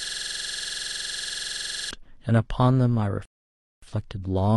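A system hang loop runs from the start to 1.91 s, with a 46 ms slice of speech repeating about 40 times as a 21.5 Hz buzz, which fits a 2048-sample ring buffer. A rebuffering stall then silences the audio from 3.25 to 3.83 s, adding 570 ms before the speech resumes exactly where it stopped.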